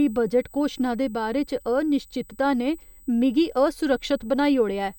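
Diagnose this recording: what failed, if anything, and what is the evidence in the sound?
A USB whine runs under the speech for the whole clip. The failure sits in the analogue wiring, where power or ground is shared with a USB device. The tone holds a fixed pitch at 8 kHz, with its strongest part at 16 kHz. It sits roughly 30 dB below the speech. An 8 kHz fundamental fits high-speed USB's 125-microsecond microframes. Each microframe's current draw pulses through the shared ground and leaks into the signal path.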